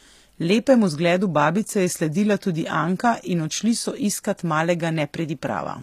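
Throughout the speech the treble sounds bright but synthetic, with s sounds turning gritty and lispy, and nothing above about 14.9 kHz. This is likely HE-AAC compression at a rate consistent with 24 kbps, rebuilding the upper band from copied lower harmonics.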